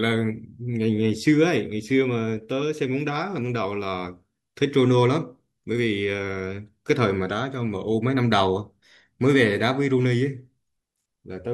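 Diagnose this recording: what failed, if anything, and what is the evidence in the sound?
Nothing failed in this recording, and there is no evidence of a fault anywhere in the sound.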